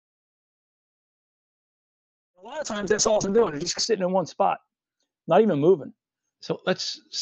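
A speech clip with three faults. A jitter buffer slow-down runs from 1.28 to 2.33 s, just after "all of a": the receiver repeated pitch periods to rebuild its reserve, adding 69 ms, so the speech plays at 94% speed with unchanged pitch. A call bitrate drop from 1.33 s to the end leaves the audio rough and muffled, with the top end cut from 20 kHz to 8 kHz; the sound fits the encoder falling from about 64 to 6 kbps, at its lowest for about 2.5 s. A jitter buffer speed-up at 6.50 to 6.65 s trims roughly 70 ms of pitch periods to shed excess delay, briefly hurrying the speech to 138%.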